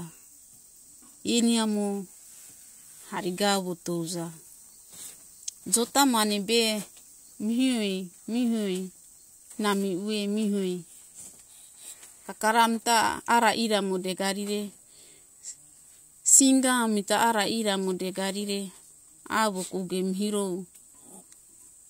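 No technical faults can be heard anywhere in the recording, and the signal holds steady and continuous throughout.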